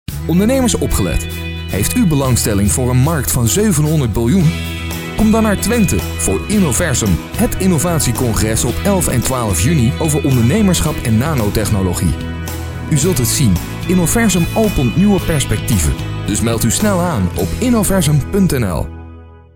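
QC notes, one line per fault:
9.26 s, loud pop: a single sharp pop stands roughly 10 dB above the surrounding sound, which continues unbroken underneath. A likely voltage step, from a plug, switch, static or driver glitch, enters the chain, unlike a dropout or splice, which would interrupt the audio.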